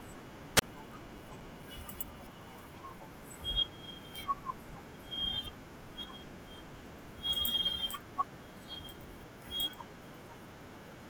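At 0.56 to 0.62 s, a wireless microphone squelch dropout: fading RF triggers a brief hiss, then a 29 ms silent gap, shown as a blank waveform and spectrogram column.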